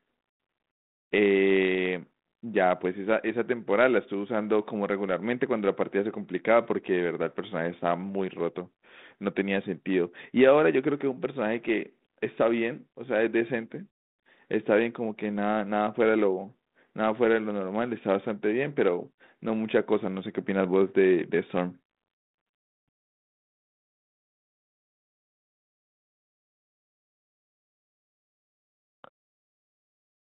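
No technical faults can be heard anywhere here.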